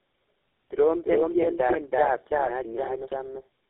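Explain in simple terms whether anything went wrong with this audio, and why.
Two things went wrong, and both last through the whole clip.

The first is a doubled audio track. Every bit of speech comes back about a third of a second later at roughly the same loudness, as if two copies were playing slightly out of step. It differs from a room echo because the repeat doesn't fade or sound roomy. It is a clean, equally loud second copy. The likely cause is the sound being picked up a second time through a slower route and mixed back in.

The second is tandem speech coding. The call passed through three different phone speech coders in a row, and each one squeezed the already damaged output of the one before. That is why the speech sounds rough, muffled and warbly, and why nothing is left above about 3.8 kHz. A single phone coder would sound thin but cleaner. This much roughness comes from the damage piling up at each handover.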